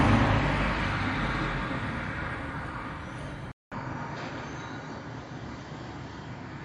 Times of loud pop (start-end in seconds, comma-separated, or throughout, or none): none